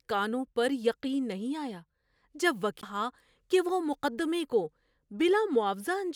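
At 2.81 s a CD skip: the laser jumps tracks, giving a very brief mute, then speech resuming elsewhere, unlike a dropout that resumes in place.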